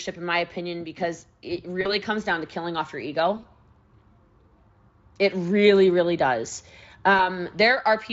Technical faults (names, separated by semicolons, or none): VoIP packet loss concealed by the speech codec